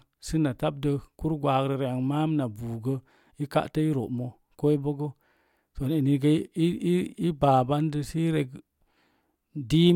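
At 7.44 s the speech has a block of digital silence only about 0.31 ms long: the sound drops straight out and returns with no fade. That abrupt edge is heard as a single tick, not a hole, unlike a longer dropout or a softened gap.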